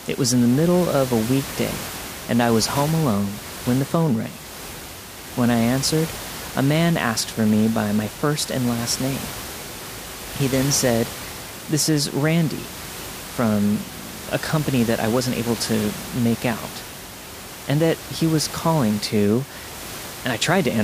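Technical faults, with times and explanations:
Nothing here counts as a technical fault; the only thing underneath the speech is the room's own background noise, sitting about 13 dB below it, and that belongs to the recording itself rather than to anything going wrong in the system.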